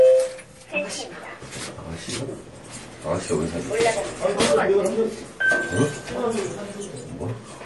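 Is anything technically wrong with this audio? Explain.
Yes. Throughout, the sound is plainly watery and swirly, with nothing above 11.5 kHz. MP3 compression at a low bitrate, around 48 kbps, is the likely cause: starved of bits, the encoder cuts the treble and flickers weak frequency lines on and off. A spectrogram shows a hard ceiling at 11.5 kHz and speckled gaps below it.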